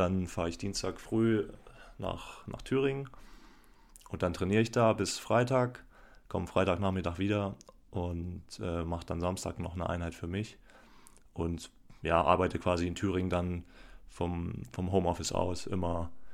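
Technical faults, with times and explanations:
15.35 to 16.33 s, DC step. At 15.35 s the waveform's zero line jumps by about -40 dBFS. The offset then holds until the clip ends. That sudden shift of the baseline is heard as a low thump or click. The speech itself carries on unchanged.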